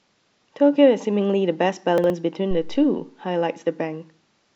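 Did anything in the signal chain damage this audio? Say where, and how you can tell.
Yes: the speech shows chunks out of order between 1.98 and 2.10 s, a buffer-stage fault. Two 60 ms chunks play swapped, with one arriving a chunk late, so the sound jumbles briefly across the hard joins. Nothing is missing; only the sequence is wrong.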